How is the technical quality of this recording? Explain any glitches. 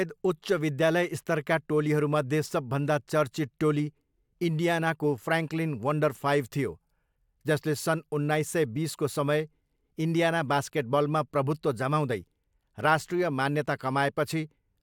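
No glitches or technical faults can be heard here.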